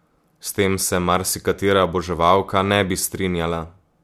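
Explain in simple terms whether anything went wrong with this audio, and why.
Listening to the recording, nothing stood out as having gone wrong with the speech at any point.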